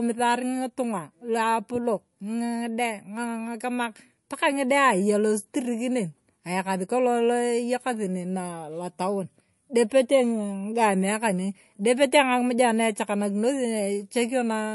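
Throughout the speech, the sound is watery and swirly, with metallic chirps on the s sounds, smeared consonant onsets, and no treble above 11.3 kHz. The likely cause is MP3 compression at a low bitrate, around 48 kbps, where weak frequency lines drop in and out between frames.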